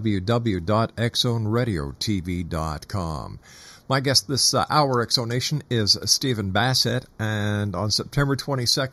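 Channel delay (comb filtering) runs through the whole speech clip. One channel arrives a fraction of a millisecond late, roughly 0.2 ms, and when the two are summed to mono the shared content cancels at evenly spaced frequencies. The first deep notch sits around 3 kHz, with further notches spaced evenly above it. That hole in the presence range makes the speech sound hollow and phasey, with a character that stays fixed throughout.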